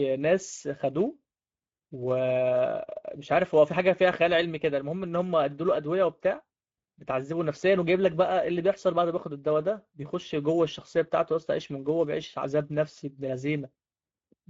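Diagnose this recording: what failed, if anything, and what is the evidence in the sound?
The codec stage failed: the speech has plainly audible Speex codec damage from start to finish, with a hoarse, noisy grain and nothing above 7.6 kHz. The sound fits a middle wideband setting, around 17 kbps, where the CELP excitation is starved and the upper band is only shaped noise.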